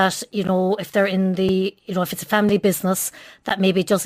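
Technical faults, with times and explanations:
Throughout: sample clock jitter. The converter clock wanders by a few microseconds, so samples land slightly early or late. Steep, loud and bright passages of the speech pick up a rough hiss roughly 30 dB below the signal, which disappears in the pauses.
0.47, 1.49, 2.49, 3.49 s: gap between stream segments. At each segment boundary, about one second apart, the timing leaves a hole that is filled with silence, lasting 12.6, 4.1, 3.2 and 12.1 ms. Each is heard as an abrupt, hard-edged dropout.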